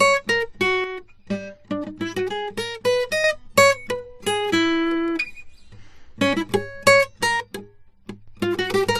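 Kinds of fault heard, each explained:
Transcoding between lossy codecs: the music has the smeared, swirly artefacts of one low-bitrate encoder stacked on those of another, with nothing above 14 kHz, likely from MP3 re-encoded to AAC. Unlike a single codec, two distinct artefact textures sit on top of each other.
One channel drops out: the music abruptly falls by about 6 dB, from 0.84 to 3.24 s, 4.26 to 4.53 s and 7.40 to 8.28 s, likely a lost stereo channel.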